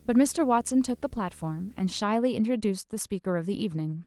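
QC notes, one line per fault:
0.0–2.0 s, video or display buzz: a harsh buzz at 75 Hz with a layer of fine hash above it sits under the speech, roughly 30 dB below it, then stops at 2.0 s. The 75 Hz fundamental matches a display's field rate, so a monitor or video cable is coupling its refresh signal into the audio path. The hash comes from sharper switching edges in that interference, and it remains audible beneath the light Opus voice coding.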